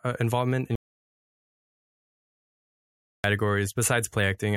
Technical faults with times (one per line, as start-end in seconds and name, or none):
0.75-3.24 audio dropout to silence